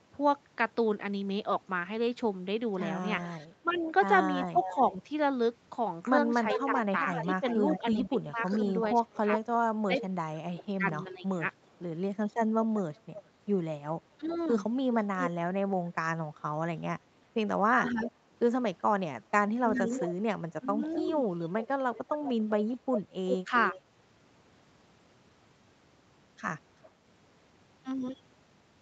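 From 3.21 to 23.81 s there is an echo leak. A delayed copy of the speech trails the original by about 388 ms, at around 10 dB below it. The likely cause is a far-end loudspeaker whose echo canceller let part of the signal return.

From 3.62 to 14.3 s, speech is suppressed in double talk. The voice dips, by up to roughly 30 dB, for about three seconds in total. This is likely the canceller ducking the talker along with the echo while both sides speak.

From 17.76 to 23.76 s the same suppression returns more mildly. The drops are around 10 dB and add up to well under a second. Likely cause: the canceller again confusing the talker with the echo.

At 26.84 s a brief echo leak recurs, lasting about 60 ms. It arrives about 394 ms late and sits roughly 30 dB down. A likely residual slip of the same echo canceller.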